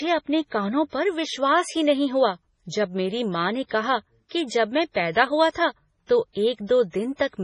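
From start to finish the speech sounds watery and swirly, with nothing above about 10.5 kHz. That's likely heavy MP3 compression, fitting a very low bitrate around 24 kbps, where the encoder cuts the treble and drops weak frequency lines that flicker between frames.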